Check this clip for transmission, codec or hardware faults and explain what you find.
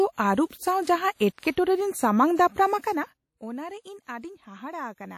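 Three faults are audible in this speech clip: codec damage throughout, one pre-echo and a stretch of zipper noise.

Throughout, the audio was likely passed through WMA compression, a transform codec working in long blocks, consistent with an early WMA encoder at roughly 48 kbps. Quantisation noise smears across each block and weak components are discarded, so the damage is plainly audible as ringing, washy speech with signal-following hiss and nothing above 17.5 kHz.

From 0.46 to 0.50 s there is pre-echo. An attack falls late in a codec block, and the noise sized for that loud moment spreads backward into the quiet before it. A hiss leads the attack by about 45 ms, softening its onset.

Between 2.67 and 3.45 s, zipper noise appears. A level reduction of about 15 dB is applied in unsmoothed steps, around 100 per second, each step producing a small discontinuity. The result is a fine ticking or zipping carried on the audio while the level falls.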